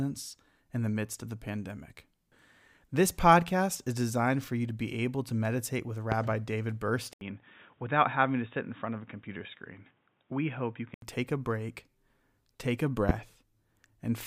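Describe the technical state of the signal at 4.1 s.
At 4.1 s the speech signal is intact, with no audible dropout, distortion or other fault at that moment.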